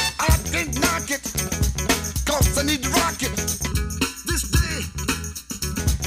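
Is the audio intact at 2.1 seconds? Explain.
Yes, at 2.1 seconds the audio plays through cleanly, with no dropout, click, distortion or other fault to be heard at that moment.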